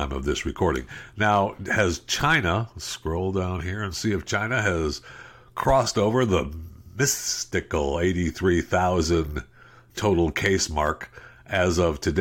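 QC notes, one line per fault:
No faults to note.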